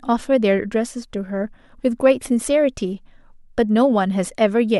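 No technical faults can be heard anywhere in the recording; the signal stays continuous and steady throughout.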